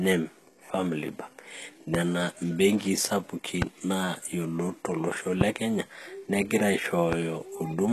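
The speech carries HE-AAC compression throughout, likely at a low bitrate near 16 kbps. The treble above the crossover is synthesized, so sibilants sound gritty and metallic, and a spectrogram shows smeared, copied-looking upper bands that stop completely at 12.3 kHz.

Four loud pops land on top of the speech, likely electrical pulses from a switch, plug or static discharge. They occur at 1.95–1.97 s, just before "imbenkii sapuki naa yiolot"; at 3.62–3.65 s, between "imbenkii sapuki" and "naa yiolot tolosho"; at 5.41–5.44 s, before "kenya negira"; and at 7.13–7.15 s. Each stands about 15–20 dB above the signal and shows as a narrow spike on the waveform and a full-height vertical stripe on the spectrogram.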